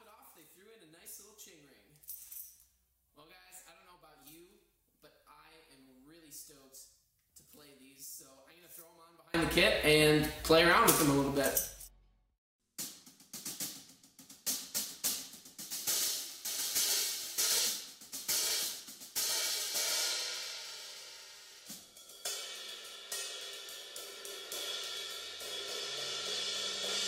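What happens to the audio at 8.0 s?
At 8.0 s the sound is still nearly gone, down about 29 dB from 0.0 to 9.34 s, likely one channel inverted, cancelling shared content when summed to mono.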